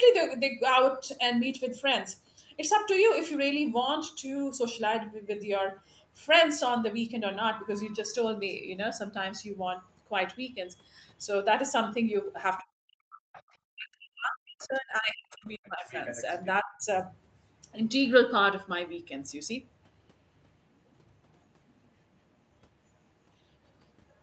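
An echo canceller on a call likely misjudged moments when both ends were talking at once. It treated the near talker as loudspeaker echo and turned the speech down, so this speech recording shows speech suppressed in double talk. The speech dips sharply or vanishes in pieces from 12.61 to 13.27 s, from 13.68 to 15.88 s, and from 16.62 to 16.82 s. The deepest drops reach around 40 dB in the first two stretches and around 25 dB in the last. The same canceller likely also left part of the far end's loudspeaker signal in the microphone path, so the other side's voice leaks through. These appear at 13.33 to 13.55 s, 15.63 to 15.68 s, 15.89 to 16.46 s and 24.09 to 24.14 s. Most are well below the talker, roughly 25 to 40 dB down. The 15.89 to 16.46 s stretch is much more prominent, only about 10 dB under the speech, and it rushes in right as the long suppression ends.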